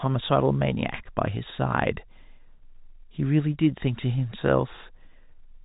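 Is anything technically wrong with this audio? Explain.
No, nothing's wrong here; it's just ordinary speech carried over G.711 telephone coding, so the top end stops at around 3.8 kHz, as you'd expect from a phone line.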